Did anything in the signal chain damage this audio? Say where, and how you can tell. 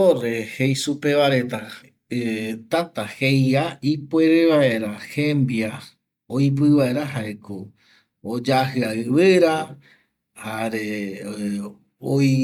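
Yes, at the codec stage, throughout the speech. It sounds swirly, smeared and hollow, with blurred attacks and nothing above 19.6 kHz. That points to generation loss, likely from around seven MP3 passes at 128 kbit/s. Each re-encode adds fresh quantisation noise and spectral holes.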